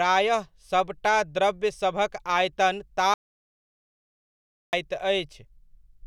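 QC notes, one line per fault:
3.14 to 4.73 s, audio dropout to silence: the speech cuts off abruptly mid-flow and the next 1.59 s is dead digital silence, with no room tone or hiss at all, before it snaps back in just as suddenly. That total absence of background is the giveaway. The input was most likely lost for a moment, through a loose connection, a dropped link or a stray mute, while the recorder kept writing silence. Whatever was said in that gap is gone.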